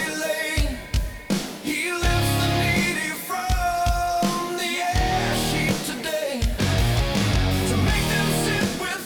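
A steady, fixed-pitch USB whine sits under the audio from 0.78 to 6.17 s, concentrated at exactly 1 kHz and roughly 30 dB below the programme. That frequency matches the 1 ms frame rhythm of a USB bus, whose current draw is leaking into the audio through shared power or ground. Mains hum would sit at 50 or 60 Hz and its harmonics, and a switch-mode supply whine would wander in pitch with load. This tone stays locked on 1 kHz.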